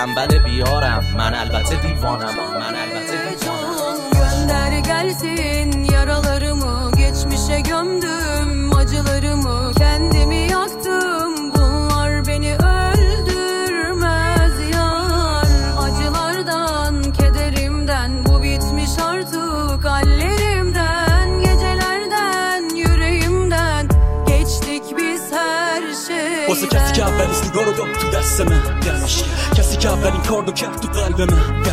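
The likely cause is a loudspeaker-to-microphone loop held just at the edge of feedback: the loop gain sits near the point where one frequency sustains itself but never quite grows into a howl. From the start of the clip until 23.39 s, this leaves a feedback whistle, a thin, steady tone at 4.3 kHz, running behind the sound roughly 15 dB beneath it, swelling and fading slowly in level before it stops.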